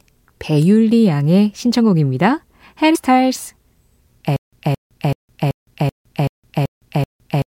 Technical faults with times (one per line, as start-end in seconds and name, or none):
4.36-7.55 stutter with silent gaps